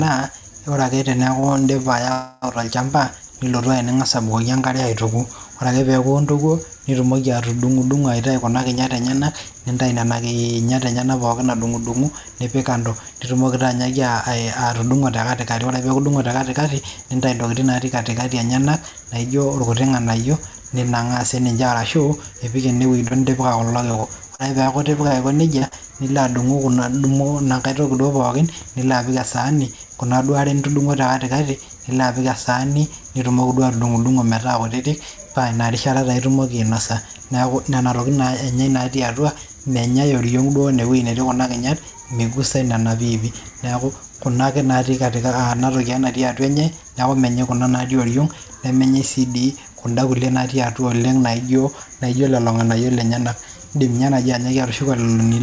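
Right at the start, 1.40 to 1.88 s, there's a stretch of repeated stalls (stutter): four short holes, the longest about 31 ms, where the receiver kept the last sound going while it waited for late packets. Nothing's lost, but roughly a fifth of that half-second is filler, so it drags and catches. Then from 2.12 to 2.45 s comes what sounds like a call audio freeze. The sound hangs and is stretched out as a continued buzz or hiss for about 300 ms with no silence, then picks up where it left off. The likely cause is packets held up in transit long enough to empty the jitter buffer, adding that much delay. Next is a jitter buffer speed-up at 8.29 to 13.33 s, running about 7% fast. The receiver trims pitch-period slices, a few hundred milliseconds in total, to shed built-up delay, so it sounds hurried at unchanged pitch. It happens again at 15.60 to 16.12 s at 10%, and at 27.96 to 28.42 s at 6%. 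Between 22.73 and 25.74 s there's repeated packet loss (robotic sound): eleven holes, the longest about 37 ms, each patched by extending the previous sound. About 240 ms is actually gone, giving a choppy texture. Throughout, the G.722 call path leaves nothing above 8 kHz.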